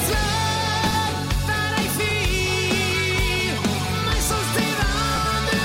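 Frames out of order: at three points, two neighbouring runs of frames reached the decoder swapped and were played that way. At 0.86 to 0.95 s two blocks of about 40 ms exchange places, which fits runs of four 10 ms frames. At 2.09 to 2.12 s and at 5.15 to 5.18 s single 10 ms blocks trade places. Each spot sounds like a brief garbled flutter. No time goes missing.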